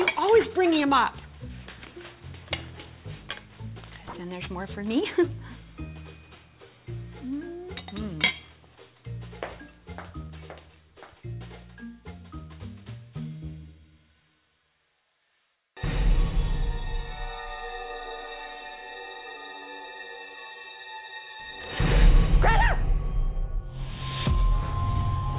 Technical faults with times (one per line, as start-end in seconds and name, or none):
0.00-25.39 aliasing